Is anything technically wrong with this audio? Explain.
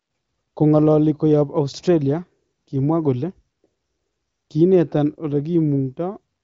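No, nothing in this speech clip points to a technical fault. It has been through the AMR wideband (HD Voice) codec at a high rate of 23.05 kbit/s, which leaves the speech clear with little audible coding damage, and the audio stops at about 7.6 kHz, as that wideband path allows.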